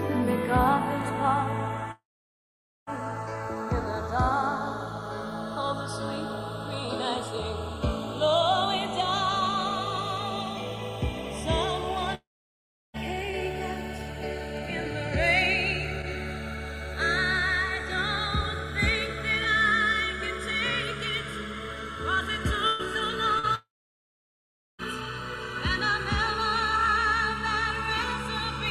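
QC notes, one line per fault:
Throughout: channels drifting apart. The two channels run on separate clocks differing by something like 30 ppm, so their offset slowly grows to under a millisecond by the end. In mono the comb notches creep across the spectrum, heard as slow flanging.
1.91–2.90 s, 12.15–12.97 s, 23.55–24.82 s: long network dropout. Audio likely stopped arriving for 0.96 s, 0.80 s and 1.24 s. Each gap begins with a short fading continuation of the last sound, then falls silent for most of its length before playback resumes with that stretch lost.
22.67–22.82 s: burst of packet loss. About 120 ms of packets failed to arrive in time. The receiver filled the entire hole by extending the preceding sound while turning it down, giving a held, fading buzz or hiss before the audio picks up further on.
23.39–23.46 s: short concealed packet loss. Roughly 40 ms never reached the decoder in time. 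The receiver patched it by continuing the preceding sound and blending back into the real signal, leaving a brief smear or wobble just ahead of the third dropout.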